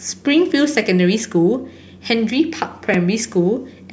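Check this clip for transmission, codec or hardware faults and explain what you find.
One fault is present in the speech. At 2.94 s, a repeated buffer: late data made the device replay its last 4 ms block twice more, which fits a 64-sample buffer, producing a brief click or buzz.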